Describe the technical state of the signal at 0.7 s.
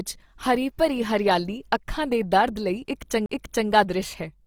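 Opus compression at 0.7 s, present throughout the clip, likely at a low bitrate near 24 kbps: band-filling leaves this speech grainy and rough, with content still reaching 20.4 kHz.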